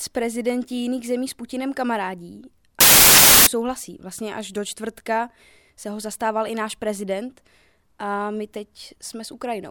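From 2.81 to 3.47 s the speech is swamped by a burst of loud, harsh broadband noise lasting about two thirds of a second. The fault is samples built from the wrong bytes: each sample's bytes were assembled in the wrong order or with a one-byte offset, so the rapidly fluctuating low-order bits took the place of the most significant ones.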